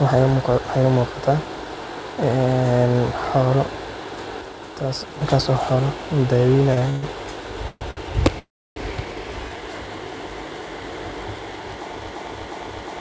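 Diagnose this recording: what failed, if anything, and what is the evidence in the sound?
A digital gain step, likely applied in the call processing or driver stage without a ramp, drops the level by about 4 dB at 4.41 s and restores it at 5.21 s. Speech and the background noise floor fall together instantly and come back together just as abruptly. That shared jump, rather than a gradual fade, points to a sudden gain jump on the digital signal rather than anything the talker did. Any click sits right on those boundaries.

Packets arrived late on the network and the jitter buffer briefly ran dry, so the receiver held the last sound instead of skipping ahead. The result is three short stalls from a late packet: 6.74 to 6.79 s (31 ms stretched), 6.79 to 6.83 s (24 ms), and 7.91 to 7.99 s (60 ms). Each one drags a sound out slightly. Nothing is lost, but timing slips by those amounts.

Longer network hold-ups, likely emptying the jitter buffer outright, produce three call audio freezes. 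From 6.89 to 7.04 s, 129 ms of stretched continuation fills the gap. From 7.68 to 7.83 s, 125 ms is filled, fading to about 30 ms of silence. From 8.39 to 8.78 s, 374 ms is filled, with roughly 310 ms of it near-silent. Speech resumes where it stopped each time, so delay accumulates rather than content going missing.

At 12.07 s the stream stalls at the playback or encoder end. It likely keeps resending its last buffered fragment, and a 0.36 s piece of audio repeats back to back, identically, until the clip ends. This broken-record loop replaces whatever should have followed, so that final stretch of speech is lost. The repetition sits within a G.722 call path at 64 kbps, so the looped audio carries the same 8 kHz upper limit as the rest.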